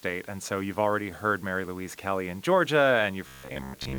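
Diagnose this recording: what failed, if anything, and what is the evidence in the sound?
Two things went wrong. The first is low bit depth with dither, at the sample-format conversion stage. A steady, even hiss runs through the whole clip, sitting only about 30 dB under the signal, with no grit or distortion riding on the sound. That points to the audio being cut down to 8 bits with dither added before rounding, so the coarse quantising error comes out as flat white noise.

The second starts at 3.27 s and runs to the end: a robotic sound from repeated short buffers. The sound turns into a rigid, metallic buzz at 66.7 Hz that still loosely tracks the shape of what's underneath. A 66.7 Hz buzz means one cycle every 15 ms, which fits a 15 ms buffer being replayed over and over. That's likely a driver or buffer stage starving for data and looping the last chunk, so most of the real audio in that stretch is skipped.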